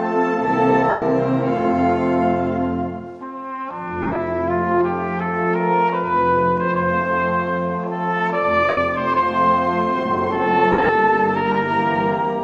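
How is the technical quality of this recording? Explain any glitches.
The recording has four short dropouts, where lost LE Audio frames break up the sound; the light lossy compression underneath is barely audible.

At 0.90–1.02 s, 4.02–4.16 s, 8.69–8.78 s and 10.72–10.89 s, the sound briefly turns into a hissy, smeared wash instead of cleanly cutting out. Bluetooth LE Audio frames went missing, and the LC3 decoder filled each gap by repeating the last spectrum with scrambled phase, fading it as the gap went on. The first and third gaps are solid runs of about 120 ms and 83 ms, which fits 7.5 ms frames. The second and fourth are scattered, with stretches of roughly 50 ms and 70 ms.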